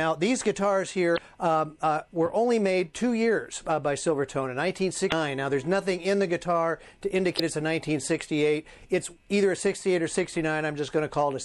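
Throughout the audio, the upper detail turns watery and swirly, with faint components flickering in and out and transients sounding smeared. That points to MP3 compression, likely at a low rate that fits about 64 kbps. The encoder runs short of bits, so it cuts off the top band and zeroes quieter frequency lines from frame to frame. A plain low-pass filter would dull the sound without this shimmering, unstable texture. At 1.14 to 1.19 s, 5.08 to 5.13 s and 7.36 to 7.40 s there are short glitches, each about 45 ms long, that break the flow. These come from damaged data in a compressed stream. Corrupted bytes make the decoder misread frames, lose sync and hunt for the next frame header. These glitches are brief and come from misread frames.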